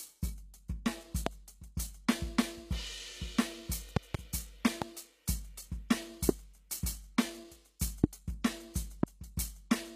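HE-AAC compression runs through the whole music clip: the treble sounds plainly synthetic and gritty, and nothing is present above 14.9 kHz. The likely cause is a low-rate HE-AAC encode, around 20 kbps, which codes only the lower spectrum and rebuilds the top by copying lower bands upward under a coarse envelope, so the upper harmonics no longer match the real ones. Loud pops sit on top of the music at 1.26, 3.97 to 4.17 (a pair), 4.82, 6.29, 8.04 and 9.03 s, seven in all, each jumping roughly 20 to 25 dB above the surrounding level while the music continues underneath. They are likely sudden electrical steps or pulses, from a connector, switch, static discharge or driver glitch, added to the signal and shaped by the circuitry that follows. Pre-echo occurs at 7.79 s, where a short hiss is smeared about 14 ms ahead of a sharp attack. The transform codec spreads quantisation noise across its whole block, so noise sized for the loud onset also fills the quiet moment just before it.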